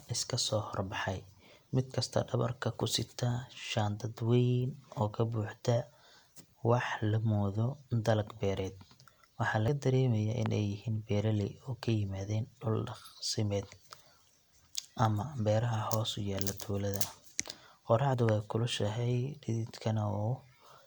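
At 1.94 s, right after "soo hor baxay mid", the speech jumps ahead, around 20 ms gone. It's likely a dropped buffer (overrun): the program didn't grab its samples before the hardware overwrote them, so the two sides just butt together. The same skip hits at 9.68 s, with about 70 ms missing.

At 10.46 to 10.48 s, just before "ay yihiin beeraley", a single loud pop lands about 15 dB above the speech, which carries on underneath. The likely cause is a voltage spike from a plug, a switch or a driver glitch.

Another dropped buffer follows at 18.14 s, losing roughly 40 ms. Then at 18.29 to 18.31 s comes a second loud pop, again about 15 dB over the signal.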